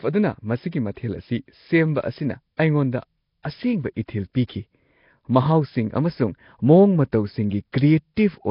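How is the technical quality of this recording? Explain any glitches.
Technical quality is poor, with heavy codec damage across the whole recording and one audible smear on an attack.

Throughout, the speech sounds rough, hissy and underwater, with nothing above 5.3 kHz. This is likely Nellymoser compression, which fits a bitrate around 22 kbps. Its coarse block coding fills weak bands with noise, so a spectrogram shows a hard ceiling and noisy, speckled upper bands.

From 3.43 to 3.45 s, just before "ꯑꯁꯦꯡꯕ ꯏꯊꯤꯜ", there is pre-echo. Block-wide quantisation noise leaks about 23 ms ahead of the attack, giving a brief hiss and a softened onset. A waveform shows fuzz preceding the transient.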